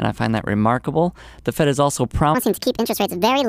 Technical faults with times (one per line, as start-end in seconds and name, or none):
2.35-3.49 section at the wrong speed